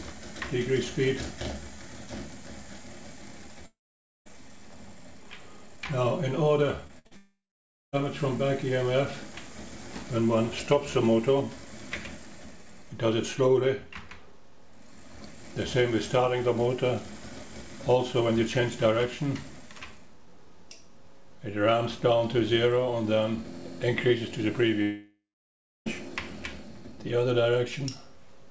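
At 3.66 to 4.27 s the sound stops: the receiver carries the last moment on briefly, then about 0.5 s of silence follows, and the audio resumes with roughly 0.6 s gone. This is a long network dropout, likely a stall in arriving audio, and it is told apart from packet loss by that stretch of silence.

A cluster of losses follows. At 6.87 to 6.91 s a short concealed packet loss replaces about 20 ms with a continuation of the preceding sound, heard as a momentary smear. From 6.99 to 7.07 s a burst of packet loss fills a 60 ms hole with the last sound held and fading, a brief buzz or hiss, and the audio picks up further on. Unlike the shorter losses, it leaves an audible held tail rather than a blink. Straight after it, 7.07 to 7.13 s brings another short concealed packet loss of about 40 ms, a quick wobble before the real audio blends back.

A second long network dropout runs from 7.17 to 7.94 s, with about 0.5 s of silence and roughly 0.76 s missing. 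A third, at 24.82 to 25.88 s, holds about 0.6 s of silence and loses about 1 s of audio. All of this sits on a call path whose coding leaves nothing above 8 kHz, which fits G.722 at 64 kbps.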